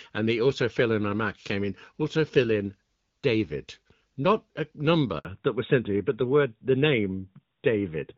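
Around 5.19 s the speech cuts out for about 60 ms, until 5.25 s. That's a handover gap: the phone switched the call from one network to another, and no speech frames got through while the link changed over. The audio dies away quickly and sits silent until the new connection picks up, so whatever was said in that slice is simply gone rather than smeared or garbled.

Straight after, from 5.25 s to the end, there's a fallback to narrowband. Before the switch the speech has the wider, clearer top end of HD Voice, with the light codec damage you'd expect from AMR-WB at around 12.65 kbit/s. From here on nothing above 4 kHz survives, which points to the call dropping to AMR-NB at 12.2 kbit/s. The voice loses its upper band and comes across duller.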